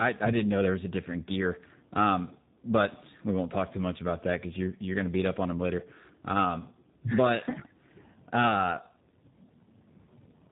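Speech, and it's got tandem speech coding running the whole way through: the signal went CVSD, then G.711 A-law, then G.729A, so two speech coders stacked, each chewing on the last one's output. It sounds rough and warbly, and nothing survives above 3.8 kHz.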